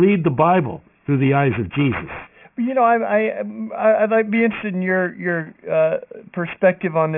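Speech, with aliasing running the whole way through. It sounds like the audio was dropped from 48 kHz to a 6 kHz rate without an anti-alias filter, so everything above 3 kHz folds back down as unrelated tones. The sibilants come out gritty and metallic, and the folded junk sits roughly 20 dB below the signal, piled up right against the band edge.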